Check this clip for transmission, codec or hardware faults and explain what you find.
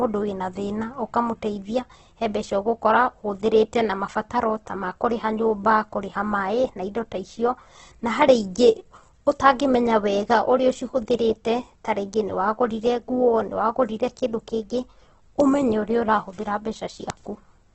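There's one fault, and it runs through the whole recording: heavy Opus compression, most likely. Every band keeps its rough energy level, but with too few bits to spend, the encoder fills the detail by folding lower bands upward or by padding with noise. So the speech comes across grainy and rough rather than swirly, and nothing survives above about 8.2 kHz. The narrowed band and the roughness point to music-mode coding squeezed to something like 12 kbps.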